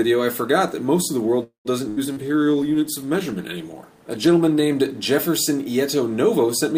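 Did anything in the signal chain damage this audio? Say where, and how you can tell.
Yes, the network stage damaged it. From 1.43 to 1.68 s there is a call audio freeze: the last sound is stretched as a fading buzz or hiss that drops to silence for about 120 ms. The sound then resumes where it stopped, about 0.22 s late. The likely cause is packets stalling and the jitter buffer running dry.

At 1.89 to 2.00 s a burst of packet loss removed about 80 ms outright. The receiver held the preceding sound as a decaying buzz or hiss for roughly 77 ms. Then the audio picks up further along, with that stretch gone.

At the codec stage, a call bitrate drop runs from 2.06 to 4.82 s. The encoder fell from 128 to 22 kbps and stayed at the floor for about 2.7 s. Coarser coding leaves the sound rough and watery, with the highs trimmed, until the rate recovers.

Inside that stretch, short concealed packet loss at 2.13 to 2.19 s lost about 40 ms. 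The decoder patched it with about 36 ms of extrapolated sound before blending back. It is heard as a brief smear or wobble where a short sound may vanish.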